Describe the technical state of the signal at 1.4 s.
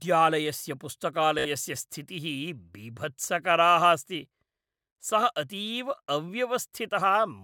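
At 1.4 s the speech has a Bluetooth stutter, from 1.39 to 1.47 s. Audio data arrived late or was lost, and the receiver replayed its last short buffer, producing a brief machine-gun buzz. The pattern points to a few dropped packets, about 61 ms of audio skipped before speech resumes.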